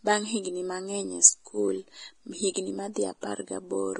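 Heavy Vorbis-style compression damage runs through the whole of this speech recording. Nothing is present above 10.6 kHz, and the remaining treble is hissy and grainy. This is likely a Vorbis encode at a very low bitrate, roughly 27 kbps, where the codec quantises the high-frequency residue so coarsely that its fine detail collapses into noise of similar energy. Pre-echo appears at 2.54 to 2.56 s, 2.93 to 2.96 s and 3.21 to 3.23 s: a short hiss of about 20, 30 and 21 ms arrives just ahead of each sharp onset and softens it. Each attack fell late in a transform block, so the quantisation noise sized for the loud sound spread backwards into the quiet moment before it.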